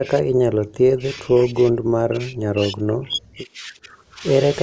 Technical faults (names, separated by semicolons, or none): speech suppressed in double talk; echo leak